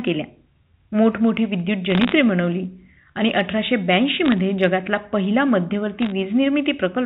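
Bit errors on a digital phone line crackle at 1.90–2.12 s, 4.25–4.32 s and 6.02–6.12 s. Flipped bits corrupt single samples, producing sharp ticks over the G.711 A-law telephone sound.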